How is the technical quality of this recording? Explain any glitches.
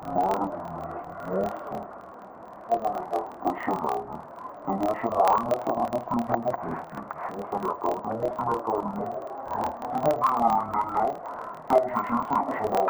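Not great, honestly: one fault runs through the whole clip. It's interleaved audio read as planar. Each block of about 26 ms had its alternating left-right samples split into halves, so both channels play at half speed, an octave down, doubled, with a choppy buzz at about 38 Hz.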